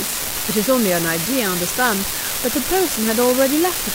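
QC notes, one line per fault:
Throughout: unreliable data bit. A steady crackle and fizz sits under the speech from start to finish. It does not stop in the pauses. One data line is marginal, so its bit flips in a random share of samples. Each wrong bit adds a spike of the same size, at about -9 dBFS. The random timing turns the spikes into a constant grainy noise.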